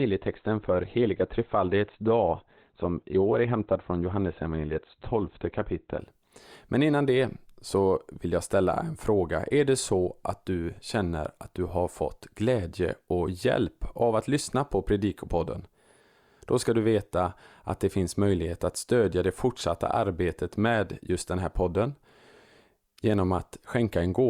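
From 0 to 6.0 s, the player began on a low rung of an adaptive stream before measuring the connection, which fits a 12 kbit/s Opus tier. Speech sounds dull, with nothing above 4.4 kHz and stronger codec artefacts, then jumps cleaner at 6.0 s without any gap.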